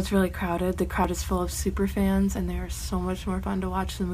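Samples were likely not read out before the hardware overwrote them, a dropped buffer (overrun). At 1.05 s roughly 70 ms vanishes, and at 2.37 s about 20 ms; the sound jumps forward without any gap of silence.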